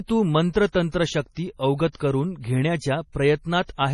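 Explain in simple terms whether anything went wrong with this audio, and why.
The recording was squeezed hard, most likely by heavy MP3 compression, which throws away detail to save space. Everything above about 11.4 kHz is gone, so the speech sounds dull and watery, with swirling where quieter parts of the sound flicker in and out.

The same compression also causes pre-echo, where noise meant for a sudden sharp sound leaks slightly ahead of it. A brief hiss, about a fortieth of a second long, comes just before the attack at 0.72 to 0.74 s, 0.91 to 0.94 s and 1.92 to 1.95 s, softening each one.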